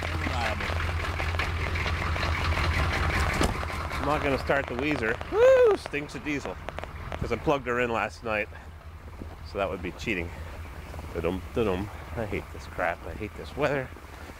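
Likely interference or a faulty connection injects a train of clicks from 0.03 to 7.16 s: around seventy irregular pops, about 10.3 per second, standing well above the sound.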